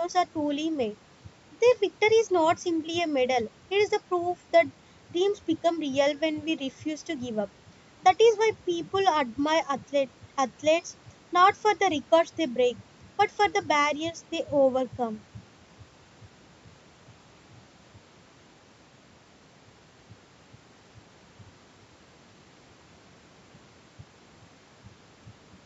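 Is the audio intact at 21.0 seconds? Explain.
Yes, the speech at 21.0 s is intact, with only the normal call microphone processing audible, as the band tops out at 8 kHz and the lowest bass is trimmed.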